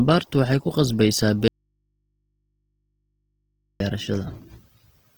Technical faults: Opus compression; audio dropout to a faint residue

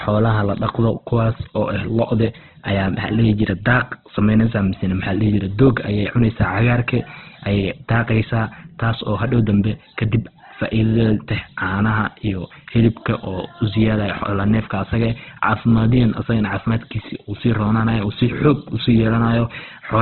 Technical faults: Opus compression

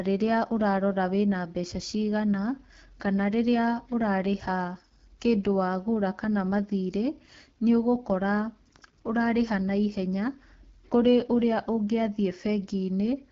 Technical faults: AMR wideband (HD Voice) codec

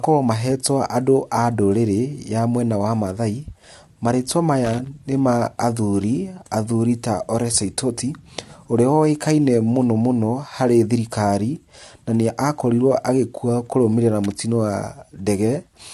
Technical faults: loose connector crackle

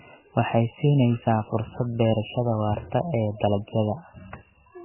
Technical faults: MP3 compression

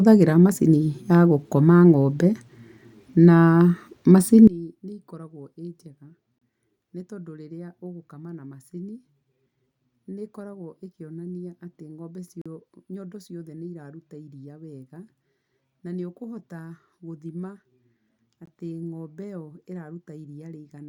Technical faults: one channel inverted; gap between stream segments

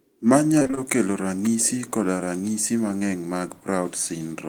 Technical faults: repeated packet loss (robotic sound); short concealed packet loss

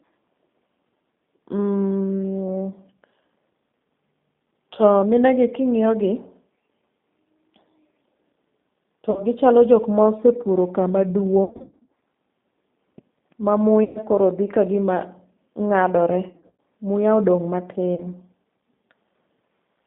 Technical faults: G.729 codec; VoIP packet loss concealed by the speech codec

